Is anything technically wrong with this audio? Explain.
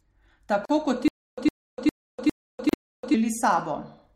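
Yes, there are two faults, one overlapping the other.

Stutter with silent gaps, 1.08 to 3.14 s: a short burst of about 109 ms plays, then roughly 296 ms of digital silence follows, and this cycle repeats five times at an even 405 ms period. The likely cause is a stalled player or stream that replayed its last buffered fragment at each retry and then ran dry. The speech that should have filled this stretch is missing.

Gap at a join of encoded pieces, 2.69 to 2.73 s: a hole of about 38 ms opens with edges smeared by the codec, and the sound resumes from where it stopped. Separately encoded segments were joined without trimming, so the encoder's start-up delay and the padding of the final frame both remain as silence. Its position fits segments about 2 s long. It falls inside the stutter span.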